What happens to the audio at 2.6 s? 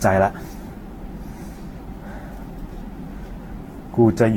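At 2.6 s the sound is swirly, smeared and hollow, with blurred attacks, as it is for the whole clip. This is likely generation loss: around seven lossy Vorbis passes near 64 kbit/s, each requantising on a shifted frame grid, piling up noise and spectral holes, with nothing above 19.3 kHz.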